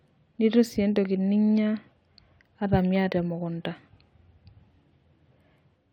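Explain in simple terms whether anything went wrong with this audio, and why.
Nothing went wrong with this speech recording. No technical fault can be heard anywhere in it.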